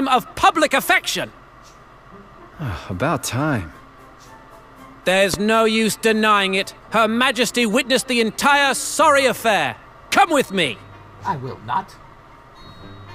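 A single loud pop cuts through the sound from 5.34 to 5.36 s. It is a sharp, brief thump, roughly 10 dB above the surrounding level. The sound carries on underneath it. The likely cause is a sudden voltage pulse, such as from a plug, switch or static discharge.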